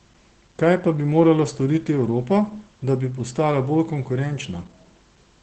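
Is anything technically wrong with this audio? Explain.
Yes. Throughout the speech, Opus voice compression is plainly audible. Nothing sits above 8.6 kHz, and the SILK linear-prediction coder renders the voice's excitation coarsely, consistent with roughly 12 kbps. The result is a muffled, hoarse, faintly robotic voice.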